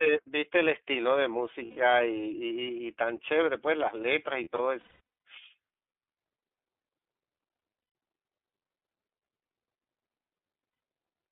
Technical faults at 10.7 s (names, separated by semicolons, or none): iLBC codec; lost iLBC frames